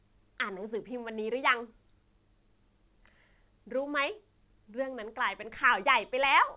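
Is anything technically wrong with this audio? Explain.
No, nothing's wrong here: the speech has simply come through a WebRTC call path using G.711 mu-law at 64 kbps, so it's expected that there's nothing above 4 kHz.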